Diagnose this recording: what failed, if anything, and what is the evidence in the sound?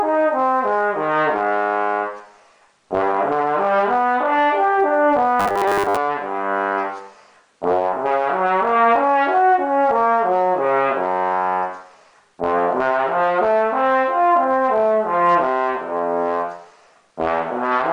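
From 5.40 to 5.97 s the sound becomes a rigid, metallic 100 Hz buzz. This is robotic sound from repeated short buffers, likely a driver or buffer underrun replaying a 10 ms block for most of that span. A spectrogram shows flat harmonic lines every 100 Hz, and the waveform shows identical 10 ms cycles.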